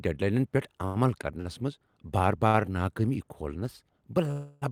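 Speech clip with short stalls from late packets at 0.85 s after "ڈیڈ لاینن پیٹھ", 1.41 s before "منز بار", and 2.47 s after "منز بار". Each holds the last sound for 45 to 95 ms while the jitter buffer waits. Then the speech resumes. A call audio freeze runs from 4.31 to 4.64 s. The last sound is stretched into a fading buzz for about 0.31 s, and nothing is lost. It is likely caused by packets held up in transit until the jitter buffer emptied.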